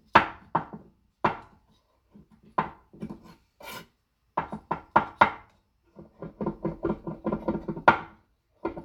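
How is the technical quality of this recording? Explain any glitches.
No glitches, dropouts or other transport or processing faults can be heard anywhere in these everyday sounds.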